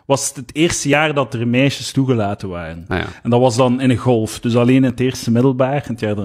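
Small skips break into the speech at 0.93 to 0.96 s, 2.91 to 2.95 s and 4.90 to 4.93 s, each dropping about 30 ms so the waveform jumps abruptly. The roughly two-second spacing marks this as overlap between stream segments: adjacent two-second segments carried overlapping time stamps, and the player trimmed the shared stretch even though that audio was never duplicated, deleting real sound at every boundary.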